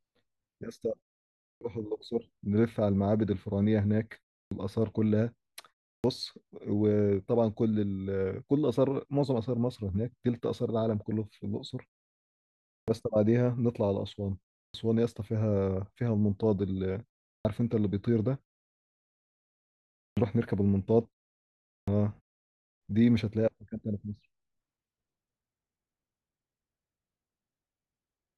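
Clipped start after a pause at 1.56, 4.46, 5.99, 12.82, 14.69, 17.4, 20.11 and 21.82 s: the output device wakes late after each pause, swallowing about 50 to 58 ms. Onsets appear as hard-edged vertical walls in the spectrogram.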